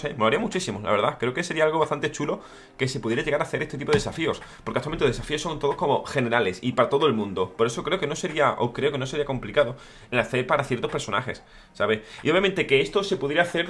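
Nothing technical stands out here, so there's no fault to point to anywhere in the audio.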